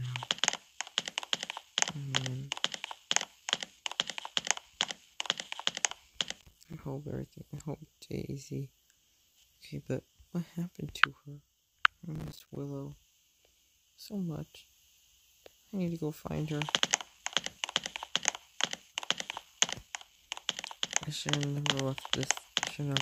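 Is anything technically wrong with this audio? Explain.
Yes. Processor overload crackle appears at 6.33 to 6.79 s and again at 12.16 to 12.57 s. The processor fell behind on its small audio buffers, each around 5 ms long, and missed many deadlines over a short stretch. Each missed buffer became a brief silent gap with hard edges. The first burst suggests about twenty misses, and the second roughly twice that. The result is a gritty, tearing crackle over the sound that stops once the load clears.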